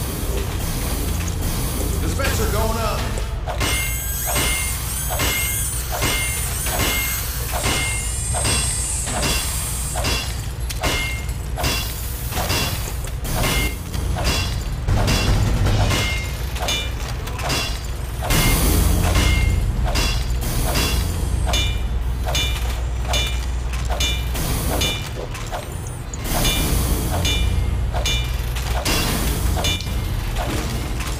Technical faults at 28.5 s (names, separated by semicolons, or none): none